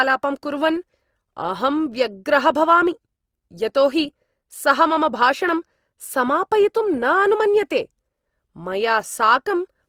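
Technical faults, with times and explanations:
Throughout, Opus compression: the speech turns grainy and rough, with a noisy, hissy texture where clean harmonics should be. The damage is plainly audible, but there are few swirling holes, and the bandwidth stays full, reaching about 20.4 kHz. This is likely Opus in its CELT mode, which keeps each band's energy but, short of bits, fills band detail by folding or noise. The coarseness points to a low bitrate, around 24 kbps.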